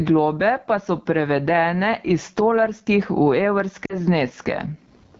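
Throughout the clip, the level is pulled down whenever the speech gets loud. The level swing is around 25 dB. Loud and soft passages sit squashed together. This is gain pumping, likely from a gain set far too high with a fast limiter pulling it back.

The AMR wideband (HD Voice) codec is also audible from start to finish. The speech sounds rough and raspy. The top band above 6.4 kHz is only hiss-like filler. This harshness fits the low 8.85 kbit/s mode, where the vocal tract model runs short of bits.

From 3.85 to 3.97 s there are lost AMR speech frames. The sound drops to near silence. The gap is about 40 ms, consistent with two frames. The decoder repeated its last good settings with falling gain, and the speech returns rough for a moment.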